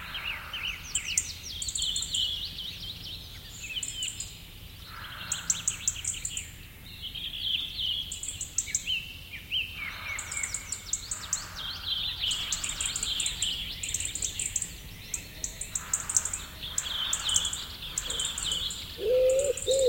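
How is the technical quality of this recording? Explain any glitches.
The recording has one clear glitch: from 12.26 s to the end, everything is heard twice. A second copy of the audio trails the first by around a second, at roughly the same loudness, so each event is followed by a full-band repeat with no fade, no room colour and an abrupt onset. This is a doubled audio track, likely caused by the signal being captured again through a slower path, or an edit leaving two out-of-step copies mixed together.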